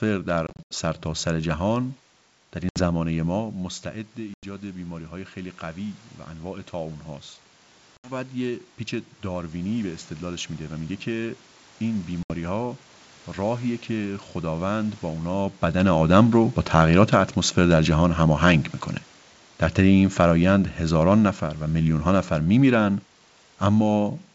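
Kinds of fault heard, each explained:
Packet loss on an ADPCM call: Packets went missing and were filled with silence, leaving hard-edged holes in the speech. The worst stretch is 0.47 to 0.75 s, where about 160 ms vanishes in scattered gaps, the longest 80 ms. Shorter holes follow near 2.69, 4.34, 7.97 and 12.23 s. After each gap the decoder's predictor and step size no longer match the sender's, so speech returns slightly distorted, settling within tens of milliseconds.
Automatic gain falling: The automatic gain control judged the input too loud, or its background noise too strong, and lowered its gain gradually. From 19.79 s to 24.0 s the level sinks by about 3 dB. The speech and the room background drop together, which separates this from a talker moving away. The fall is slow and steady rather than sudden, as the control eases the gain down.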